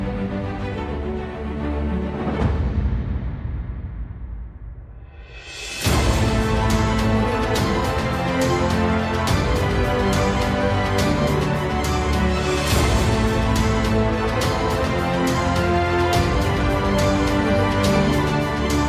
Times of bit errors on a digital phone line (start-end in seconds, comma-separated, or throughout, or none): none